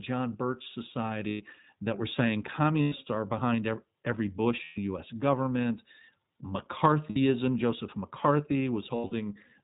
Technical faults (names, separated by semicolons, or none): iLBC codec; lost iLBC frames